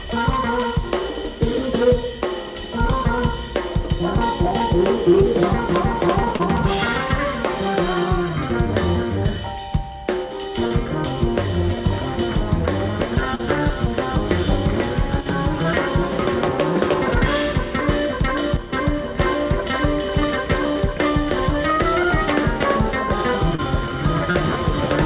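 Short concealed packet loss hits at 6.36, 10.67 and 13.35 s: about 40 ms never arrived, and the receiver extrapolated the preceding sound, leaving a brief smear or wobble rather than silence. At 15.21 to 15.26 s and 18.57 to 18.72 s the level drops abruptly by about 6 dB, likely one channel dropping out before the mono sum; unlike concealment, there is no smearing, just a clean dip. Short concealed packet loss returns at 23.55 and 24.31 s, with the same smeared fill. Throughout, the call path leaves nothing above 4 kHz.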